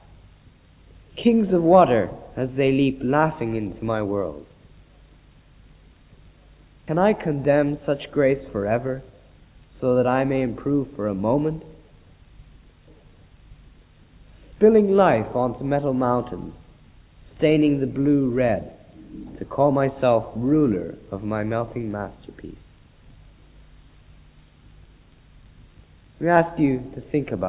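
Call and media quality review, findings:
No transmission, capture or playback faults detected across the signal.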